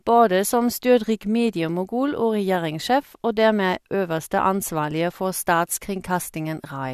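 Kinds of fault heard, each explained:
Nothing stood out on listening to this recording.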